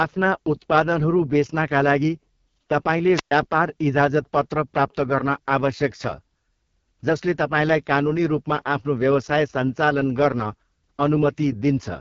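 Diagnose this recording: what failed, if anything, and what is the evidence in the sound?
AMR wideband (HD Voice) codec damage runs through the whole clip, at the codec stage. The speech is rough and raspy and nothing reaches above 7.3 kHz, which fits AMR-WB at its lowest 6.6 kbit/s mode, where the pulse-driven vocal tract model lacks the bits to code speech cleanly.

A wireless microphone squelch dropout occurs from 3.12 to 3.31 s, in the analogue radio link ahead of the converter. The FM signal fades, hiss rises, and the receiver's squelch then mutes the output for about 118 ms before the speech returns.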